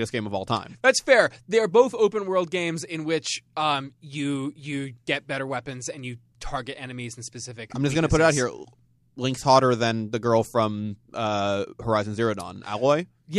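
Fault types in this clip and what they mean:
No technical faults can be heard in the recording, and the signal stays continuous and stable throughout.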